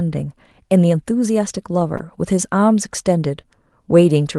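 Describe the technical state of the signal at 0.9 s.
At 0.9 s the speech comes through intact, with no dropout, click, distortion or other fault, only the band-limited sound of the Opus call codec, whose coding keeps content up to about 12 kHz.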